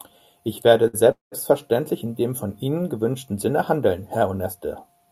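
Short stall from a late packet at 0.87 to 0.95 s: the jitter buffer ran dry and about 60 ms of the preceding speech is held over with a faint buzz before it resumes, with nothing lost. A call audio freeze follows at 1.11 to 1.34 s. The sound stretches into a fading buzz and then about 140 ms of silence, likely because packets were delayed in transit, before it picks up where it stopped. A second short stall at 2.83 to 2.86 s, right after "dem von", holds the last sound for about 17 ms.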